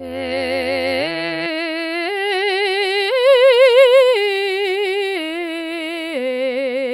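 From the start to 1.47 s the music carries overlap-add ripple. Windowed frames were rejoined with overlaps whose gains don't sum evenly, so the level dips by about 11 dB once per frame, around 150 times a second. The result is a metallic buzz with extra tones around each note rather than clicks or a slow musical tremolo.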